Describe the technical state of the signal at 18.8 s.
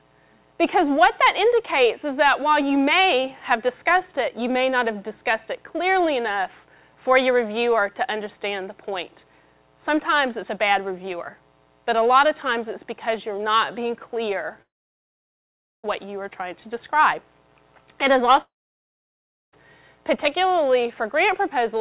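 At 18.8 s the signal sits inside what is likely a long network dropout, running from 18.41 to 19.54 s. Almost nothing arrives: a brief fading continuation of the last sound gives way to about a second of near-silence, and the audio resumes with that stretch missing.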